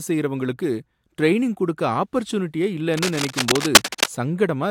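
Right after "செய்றவங்களுக்கு டிரெய்னிங் கொடுக்க ஆஃபர்சூனிட்டியே", from 2.88 to 4.06 s, a burst of cable scratch noise comes in over the speech. It's a dense, ragged scratching and rustling, roughly as loud as the talker, so it really sits on top of things for just over a second. That's likely a worn cable, connector or control being moved, with its contact resistance jumping around and spraying irregular noise into the signal.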